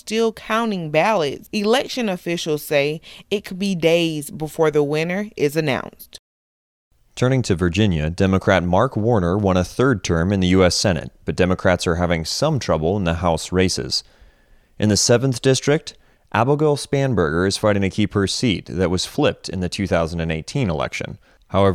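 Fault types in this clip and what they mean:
No faults detected in this speech recording; nothing in the signal chain calls for comment.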